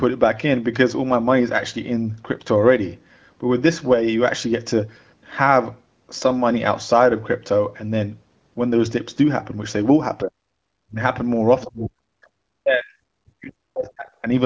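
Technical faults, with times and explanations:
10.23 to 14.26 s, speech suppressed in double talk: the speech drops sharply, by roughly 40 dB at its deepest, at 10.23 to 10.41 s, 10.85 to 11.01 s, 11.65 to 12.27 s and 12.62 to 14.26 s, with the gaps ranging from a fraction of a second to about a second and a half. The likely cause is an echo canceller that, with both ends talking at once, mistook this talker for loudspeaker echo and pulled the level down, cutting the speech out in pieces.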